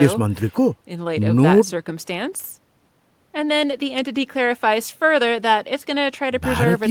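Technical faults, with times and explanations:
No technical faults are audible anywhere in this speech recording.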